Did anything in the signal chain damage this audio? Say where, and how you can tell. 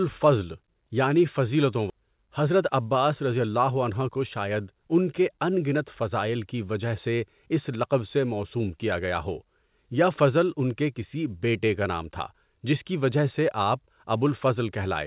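Yes, two faults at the network and jitter-buffer stage. At 1.90 s there is a skip ahead: roughly 0.7 s of audio was dropped and playback jumps straight to later material with no fill. On a waveform the two sides butt together with no silent gap, and a spectrogram shows an abrupt discontinuity in the patterns.

From 2.00 to 4.50 s the jitter buffer speed-up shortens the backlog by cutting short pitch-period slices repeatedly, about 200 ms in total, so the audio runs at about 108% speed with unchanged pitch and sounds hurried. A spectrogram shows harmonics at normal spacing but compressed syllable timing.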